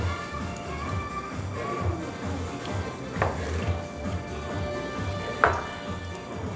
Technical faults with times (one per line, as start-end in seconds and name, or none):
none